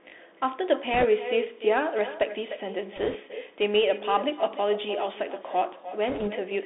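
From the start, the speech is dull and band-limited to roughly 250 Hz to 3.6 kHz, with scratchy sibilants and a granular hiss. This is the Bluetooth CVSD headset codec, consistent with a 64 kbit/s link.

Throughout, each phrase is trailed by a thinner copy about 11 dB down and roughly a third of a second late. This is echo with no canceller: the far-end loudspeaker's output feeds back into its microphone.

At 0.94 to 1.05 s, 2.96 to 3.15 s and 6.08 to 6.28 s, brief rushing crackle without loud clicks covers the sound. These are bit errors on a Bluetooth voice link, at a rate of a few percent.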